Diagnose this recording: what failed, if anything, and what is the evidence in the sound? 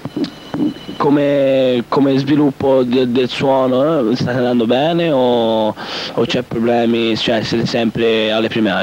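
Nothing failed; no fault detected.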